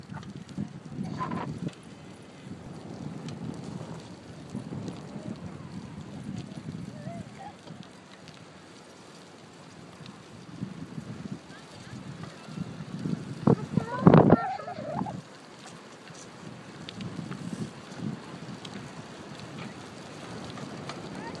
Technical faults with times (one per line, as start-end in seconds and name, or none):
none